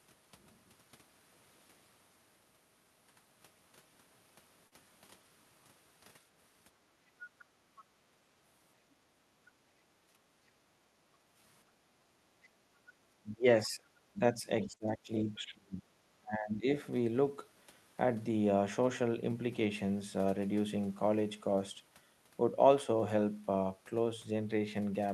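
At 4.67 to 4.74 s the speech briefly smears, a short wobble where about 40 ms of sound is stretched rather than heard cleanly. This is short concealed packet loss: a 40 ms stretch of the call never arrived at the decoder in time, so the receiver extended the preceding sound to bridge the hole and then blended back into the real signal.

At 7.39 to 7.45 s and again at 7.77 to 7.83 s, faint scraps of a second voice appear underneath, roughly 30 dB and then 25 dB below the talker. They last about 60 ms each. This is the other side's voice leaking through, likely because the far end's loudspeaker output reached the microphone and the echo canceller did not remove all of it.

From 10.01 to 11.34 s the room background sinks by up to about 13 dB, for around a second in total, then comes back. A shorter dip of about 8 dB follows at 11.80 to 11.93 s. This is background gated by the echo canceller, which pulled the microphone down hard while the loudspeaker was active and released it afterwards.

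Between 13.21 and 15.86 s the talker's speech dips, dropping by as much as roughly 25 dB over about a second and a half in total. A second occurrence at 16.20 to 16.66 s goes down by around 20 dB for about half a second. This is speech suppressed in double talk. The likely cause is both sides speaking at once, so that the canceller could not tell the near talker from the echo and turned both down. Inside the first stretch, at 14.75 to 14.83 s, another short concealed packet loss adds a brief smear where about 40 ms of missing audio was filled in.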